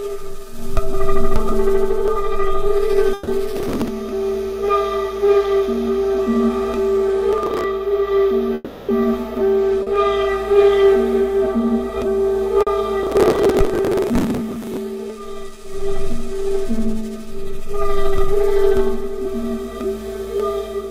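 Just past 3.1 s, from 3.13 to 3.29 s, there's a burst of packet loss. A run of packets went missing, and the receiver covered about 140 ms by stretching the last bit of sound and fading it down. You hear that stretch as a smeared, dwindling continuation, and then the sound picks up further along. Whatever happened in that window is simply gone rather than delayed.

Right after, from 3.57 to 3.88 s, processor overload crackle kicks in. The machine was missing its deadlines for tiny audio buffers, around a millisecond and a half each, and rather than repeat anything it just skipped them. Dozens of little hard-edged holes in a row give a gritty, tearing crackle over the everyday sound. It comes back from 7.38 to 7.64 s as a shorter patch, and lasts longest from 13.03 to 14.77 s. That last stretch is well over a second of continuous grit, with something like a hundred-plus skipped buffers.

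From 8.55 to 8.91 s the sound gives way to about 340 ms of synthetic fill: the last sound held on and fading as a buzzy or hissy tail, never quite dropping to dead silence. Then the sound returns further on with that chunk missing. A gap that long is most likely a long network dropout.

There are two short concealed packet losses, at 9.83 s and 12.63 s, each about 40 ms. The decoder lost a few hundredths of a second and patched the hole by extending what came before, then blending back in. Each one comes across as a quick smear or wobble.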